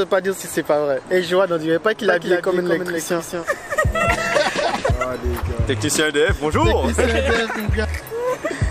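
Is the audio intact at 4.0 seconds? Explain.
No. At 4.0 s the audio sits inside a doubled audio track running from 2.05 to 4.91 s. A second full-band copy trails about 200 ms behind at roughly 5 dB lower, with no decay or room colour, likely from a slower capture path mixing in a delayed duplicate. It starts and stops abruptly.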